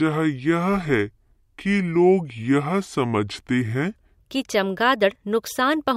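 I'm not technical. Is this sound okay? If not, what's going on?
No. From the start to 4.18 s there is a section at the wrong speed. It plays at about 0.67 times normal speed, so the speech sounds slow and deep, about seven semitones lower. It was likely played against the wrong clock.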